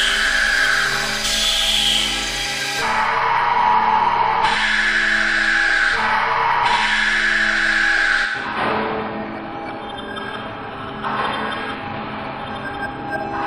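Compressed frames skipped at 1.75, 4.54, 11.74 and 12.85–12.87 s. The audio jumps roughly 70 ms ahead (100 ms at 11.74), which fits whole 23.2 ms frames dropping out.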